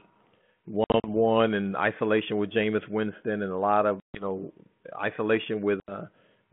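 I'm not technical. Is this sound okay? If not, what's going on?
No. There is packet loss on an ADPCM call at 0.84 to 1.09 s, just before "one and isolation with", at 4.0 to 4.24 s, right after "and a lot of", and at 5.8 to 5.92 s. Small chunks of the phone signal went missing and were filled with silence, giving abrupt holes. Afterwards the receiving end briefly loses track of the speech, so it comes back with a bit of roughness before settling.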